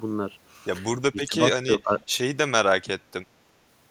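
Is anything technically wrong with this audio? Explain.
Yes. At 1.12 to 1.36 s, 1.78 to 2.04 s and 2.84 to 2.90 s the speech dips in patches by roughly 10 to 15 dB: speech suppressed in double talk, likely an echo canceller ducking overlapping talk.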